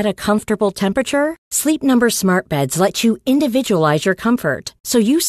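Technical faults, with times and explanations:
No technical faults can be heard in this speech recording. There is nothing to time or explain.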